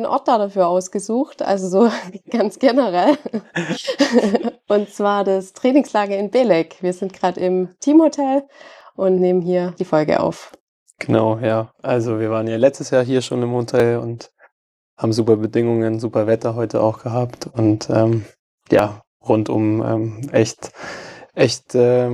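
The audio skips at 3.81, 8.81, 13.80 and 18.79 s, each a splice losing a few milliseconds with no gap left. The steady 5-second spacing points to audio missing between chunks, likely lost as a 5 s recording block closes and the next opens.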